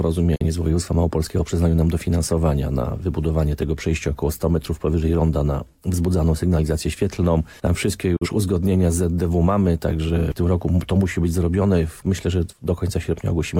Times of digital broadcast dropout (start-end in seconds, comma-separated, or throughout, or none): 0.35-0.45, 8.16-8.27